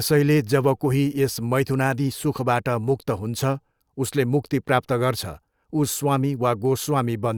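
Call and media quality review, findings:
Nothing to flag on this speech recording, so there's no finding to raise on the ticket.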